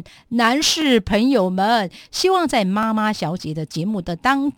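At 0.82 s and again at 2.83 s the speech shows overlapping chunks: the audio was handled in blocks of 2.0 s, and each new block began about 13 ms before the previous one had finished. That short stretch therefore plays twice at each join, and the doubled fragment is heard as a click or a stutter. The two joins fall 2.0 s apart, matching the chunk length.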